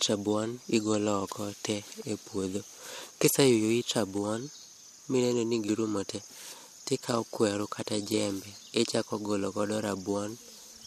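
Nothing in the speech stood out as a technical fault on listening.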